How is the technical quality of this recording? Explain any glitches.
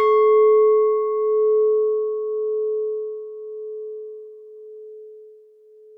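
Listening closely, nothing in the recording stood out as a technical problem or glitch.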